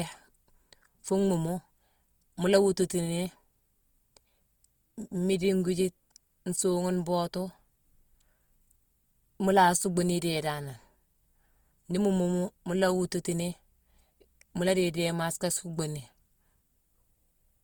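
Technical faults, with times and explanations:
Throughout, Opus compression. The speech has a rough, grainy texture, and sustained sounds turn noisy instead of clean. The damage is plainly audible. The top end stays open, with content reaching 20.1 kHz, so nothing sounds muffled or narrowed. The cause is likely Opus in its music mode, which keeps each band's energy but fills bands short of bits with folded or noise-like content. The amount of grain fits a low bitrate of around 24 kbps.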